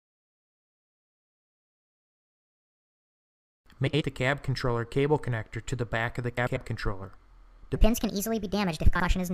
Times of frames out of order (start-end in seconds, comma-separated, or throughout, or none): 3.86-4.02, 6.37-6.57, 8.95-9.04